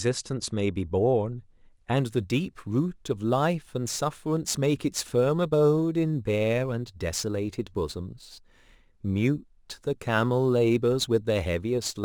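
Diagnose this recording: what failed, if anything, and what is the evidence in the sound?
Crude rate conversion in sample-format conversion: from 1.98 s onward, repeated samples, fitting a 44.1 to 48 kHz change, add gritty inharmonic fizz about 25 dB below the speech.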